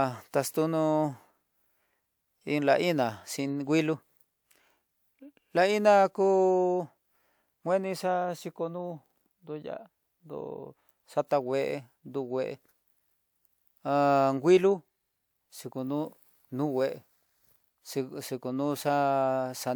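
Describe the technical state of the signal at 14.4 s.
At 14.4 s the speech signal is intact, with no audible fault at that moment.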